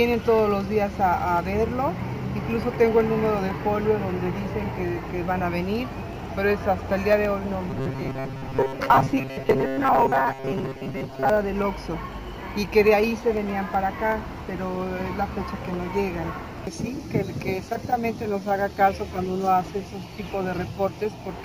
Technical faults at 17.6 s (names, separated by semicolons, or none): none